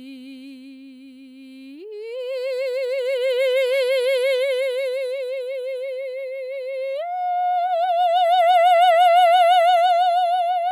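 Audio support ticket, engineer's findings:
Listened to the full music clip and nothing stood out; no findings to log against any component.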